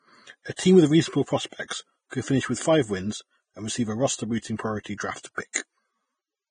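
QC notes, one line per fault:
Throughout: Vorbis compression, likely the cause of the heavy damage heard across the speech. Nothing remains above 9.7 kHz, and the treble under that cut-off is grainy and hissy. The coder draws a smooth spectral outline and spends too few bits on the detail riding on it, so fine high-frequency structure is swapped for noise of similar energy. The thin, rough texture fits a bitrate near 21 kbps.
0.56–0.59 s, 1.68–1.70 s, 4.83–4.86 s, 4.98–5.00 s and 5.53–5.55 s: pre-echo. A short hiss of 22 to 27 ms runs just ahead of each sharp onset, and the attacks sound softened. The transform codec spreads quantisation noise evenly across a whole block. When a sudden loud sound arrives late in the block, noise scaled to that loud moment leaks back into the quiet gap before it.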